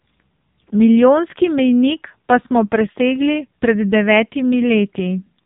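From start to finish the speech carries AMR narrowband mobile codec damage. Nothing above 3.8 kHz survives, and the heavy buzzy, synthetic texture from a pulse-driven vocal-tract model points to a low-rate mode, which fits about 5.9 kbps AMR-NB.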